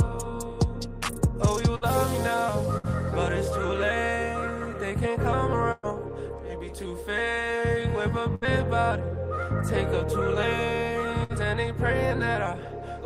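Bursts of packet loss hit at 1.75, 2.77, 5.72, 8.35 and 11.24 s. Each time except at 5.72 s the receiver stretched the last sound for about 60 ms while fading it, and the audio jumps ahead, skipping about 60 ms. At 5.72 s the stretch lasts about 115 ms, then briefly drops to silence, and about 120 ms goes missing.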